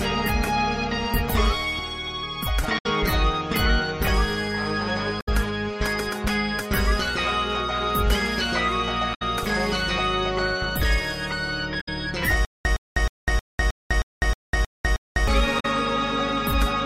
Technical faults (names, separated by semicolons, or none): damaged data in a compressed stream; stutter with silent gaps